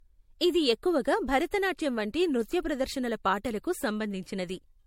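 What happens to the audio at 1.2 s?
At 1.2 s the speech sounds swirly, smeared and hollow, with blurred attacks and nothing above 16.5 kHz, as it does throughout the clip. This is likely generation loss: repeated lossy re-encoding, about four passes consistent with 64 kbit/s MP3, each adding quantisation noise and spectral holes on a shifted frame grid.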